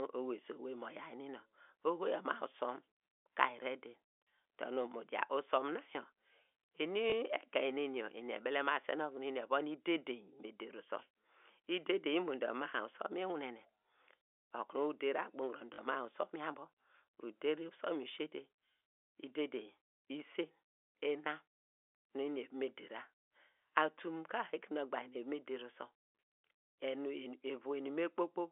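A small blip at 7.10–7.12 s and a short robotic stutter at 15.74–15.78 s come from packet loss with last packet repeated. The receiver replayed the previous audio over gaps of 20 ms and then 40 ms.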